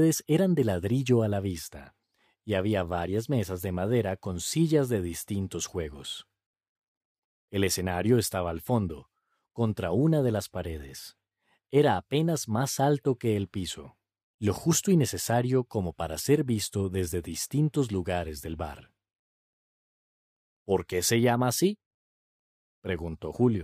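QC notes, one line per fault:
No audible faults found in this speech recording.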